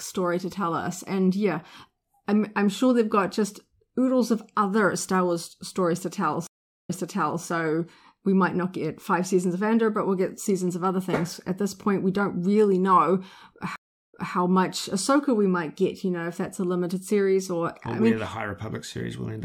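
At 6.47 s and again at 13.76 s the speech drops out for 0.42 s and 0.37 s, then resumes 0.55 s and 0.21 s earlier, repeating material. This is a stream reconnect: the connection broke, and a fresh decoder restarted from a resent earlier point.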